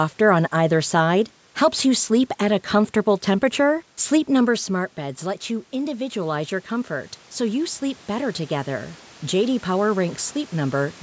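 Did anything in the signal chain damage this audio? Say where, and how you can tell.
Yes, automatic gain rising in the call processing from 4.66 to 10.98 s. Voice and room noise swell together by about 6 dB as the AGC chases a quieter input.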